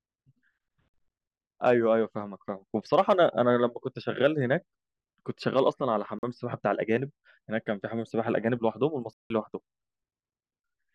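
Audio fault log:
0.90 s and 6.19 s, block of digital silence: the output buffer likely went unfilled and about 43 ms became zeros, fitting a 2048-sample block; abrupt edges frame a brief hole.
9.13–9.30 s, block of digital silence: a longer 170 ms run of zeros, consistent with four such blocks missed, cuts the speech out entirely, between hard edges.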